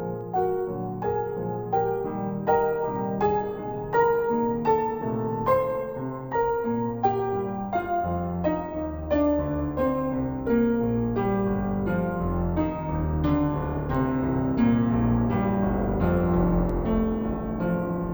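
Stereo read as mono affects the music from start to finish. The left and right samples, which alternate in the stream, have been taken one after another as a single channel, so every stereo frame is stretched into two consecutive samples. The piece therefore plays at half speed and sits a full octave, 12 semitones, below where it belongs, sounding sluggish and dark, with a faint mirrored image of the sound appearing in the upper half of the spectrum.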